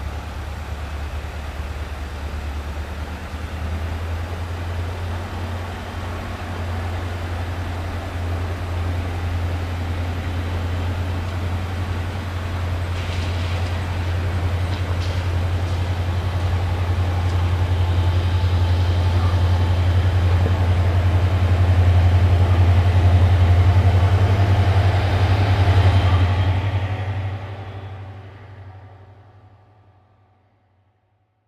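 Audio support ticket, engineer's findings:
Nothing stood out on listening; no audible issue found in the clip.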